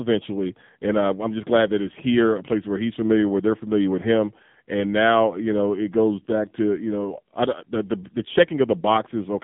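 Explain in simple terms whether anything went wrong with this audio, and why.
The speech went through the AMR narrowband mobile codec, an old phone-network coder, at a low setting for the entire clip. It keeps roughly 150 Hz to 3.7 kHz and drops everything above 3.8 kHz, so the voice sounds muffled, buzzy and heavily synthetic.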